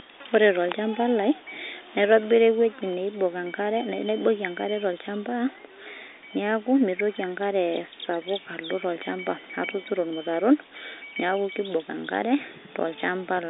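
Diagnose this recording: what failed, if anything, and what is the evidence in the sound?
Nothing failed; no fault found.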